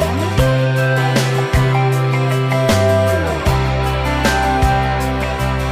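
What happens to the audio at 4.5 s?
Nothing goes wrong at 4.5 s; the audio plays through that moment intact.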